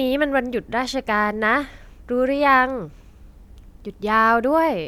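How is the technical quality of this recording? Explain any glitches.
No technical faults are audible.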